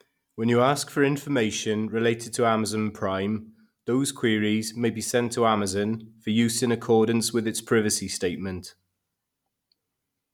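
A speech recording with nothing technically wrong with it.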